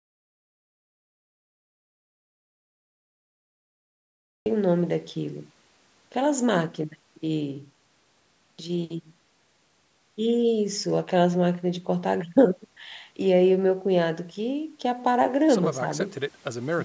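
Speech that opens in dead digital silence, with no room tone, until the audio drops back in at 4.46 s; this audio dropout to silence is likely a lost input. The call microphone path limits the sound to 8 kHz.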